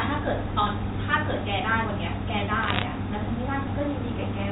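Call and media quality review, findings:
Crackle of sharp ticks, 2.63 to 2.84 s, over intact speech on a G.711 mu-law line with nothing above 4 kHz. Bit errors on a digital phone line. Each flipped bit corrupts one sample. Sign or high-bit hits tick. Error rate under 1%.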